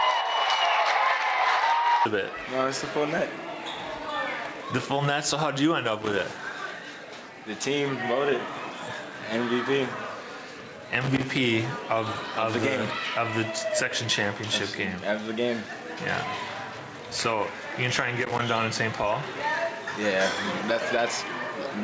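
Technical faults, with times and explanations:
Throughout: gain pumping. Loud and soft parts sit closer in level and the sound is squashed, with a gain swing of roughly 5 dB, likely from gain set too high feeding a fast limiter.
6.02–6.19 s, 11.01–11.38 s, 18.21–18.40 s: loose connector crackle. Short irregular bursts of scratchy crackle where a bad contact kept making and breaking, chopping the signal.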